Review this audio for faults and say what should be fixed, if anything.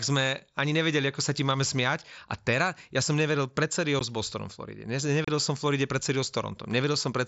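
Unconcealed Bluetooth headset packet loss occurs twice. At 3.99 s, right after "ja som nevedel pred", about 15 ms of audio drops out. From 5.25 to 5.28 s, just before "som v", a 30 ms gap opens. Short voice packets between headset and phone were lost, and silence or an idle pattern took their place, so each gap is a hole with abrupt edges. Concealed loss would smear or repeat the preceding sound instead. The whole band disappears at once, which points to packet loss rather than the upper bands flickering through the mSBC wideband link. Enabling packet loss concealment in the headset audio path, and reducing radio interference or distance between headset and phone, would prevent these holes.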